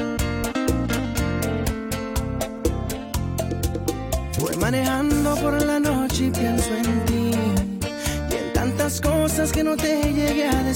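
No technical faults can be heard anywhere in this clip.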